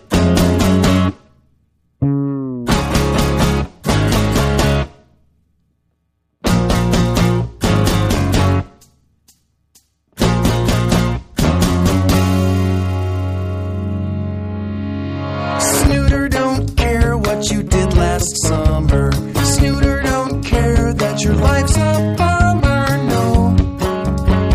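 The audio shows no audible technical faults at any point.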